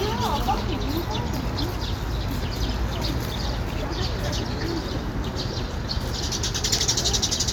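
No technical faults can be heard in this sound.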